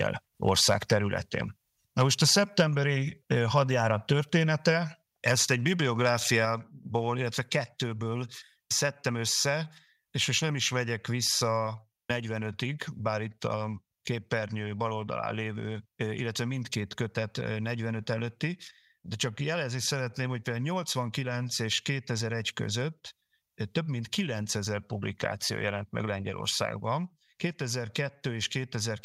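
From 0.48 to 0.93 s, again at 2.0 to 2.03 s and at 5.27 to 5.32 s, the loudest speech turns harsh and crackly: microphone overload, likely from input gain set roughly 3 to 4 dB too hot for the converter. The waveform shows flattened tops on a small share of samples, and the spectrogram shows brief broadband smears above the harmonics. At 6.45 s the microphone volume stepped down, likely an automatic gain correction, dropping speech and background together by about 3 dB, visible as a sudden lower waveform envelope.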